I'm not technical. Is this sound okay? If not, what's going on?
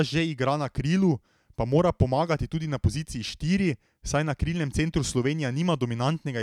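Yes, the signal is technically sound, with nothing audible in the recording that points to a fault.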